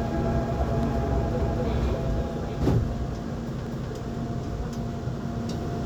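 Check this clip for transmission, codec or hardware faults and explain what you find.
Two faults are audible: a single loud pop and a repeated overlapping-chunks stutter.

Loud pop, 0.83 to 0.85 s: a sharp pulse sits on top of the sound for about 20 ms, peaking a few decibels above it, while the sound continues underneath. Its shape points to a sudden voltage step, likely from a plug, switch, static discharge or driver glitch. The following circuitry shapes that step into a brief pulse, heard as one clean pop.

Overlapping chunks, 1.42 to 1.67 s and 3.67 to 3.92 s: at each of these joins a 250 ms stretch of audio plays twice. The stream was cut into 2-second chunks, and each new chunk began before the previous one had finished, so the overlap is replayed. This produces a stutter with a click at the seam, recurring about every 2.25 s.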